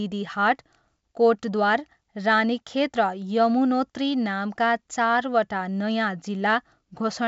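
The speech carries the bandwidth of G.722 wideband telephone coding at 64 kbit/s, with content ending near 7.7 kHz and at most a faint coding trace, and nothing in the signal stands out as a technical fault.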